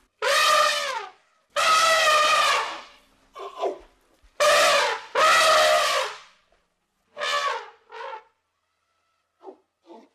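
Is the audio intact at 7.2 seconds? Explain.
Yes, at 7.2 seconds the audio plays through intact, with no dropout, click, distortion or other fault to be heard at that moment.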